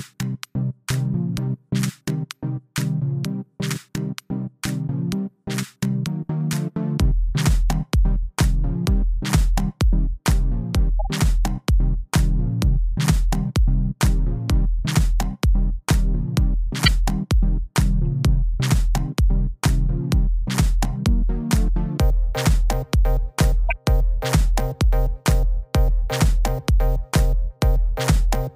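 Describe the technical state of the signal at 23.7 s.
A corrupt frame decoded at 23.69–23.72 s: damaged compressed data was played anyway, misplacing energy across frequencies in a brief blip peaking around -10 dBFS.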